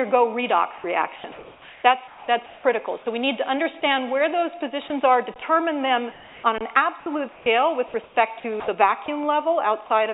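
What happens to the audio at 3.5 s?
At 3.5 s the audio passes through intact, carrying only the ordinary narrowband character of the call path, with nothing above 4 kHz, and no fault occurs there.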